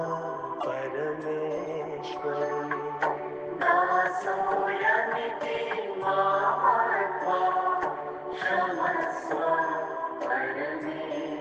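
Two short glitches of misplaced noise, at 0.60 to 0.64 s (peaking near -20 dBFS) and 2.49 to 2.52 s (near -25 dBFS), are corrupt frames decoded: damaged compressed data played back with wrong gains or misread codes, each burst spanning a few frames.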